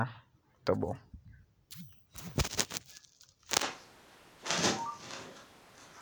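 At 3.63 s the speech abruptly turns roomy and hollow, losing its low end, and stays that way to the end of the clip. The loudness barely changes, but background room noise rises to roughly 25 dB below the speech. This sudden change in tone is the sound of a switch to a distant microphone, likely because the close microphone's signal dropped out and a mic farther away, hearing more of the room, took over.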